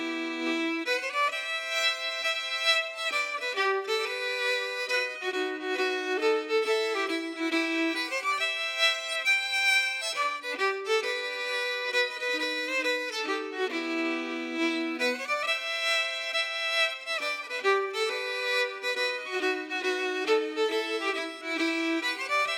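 Clock slip clicks run from 0.4 s to about 22.23 s: faint, evenly spaced ticks roughly every 0.4 s, around fifty in all, each a single-sample jump in the waveform. They stand out most where the audio is loud and sustained or bright, and drop away in quiet passages. The steady spacing likely comes from two devices running on unsynchronised clocks about 50 ppm apart, so one sample is dropped or repeated each time their drift reaches a whole sample.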